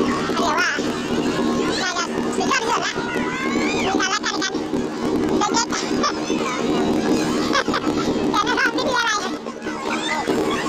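Planar audio read as interleaved, throughout: each 26.12 ms block plays twice at double speed, left then right, giving an octave-high sound with a 38.3 Hz buzz.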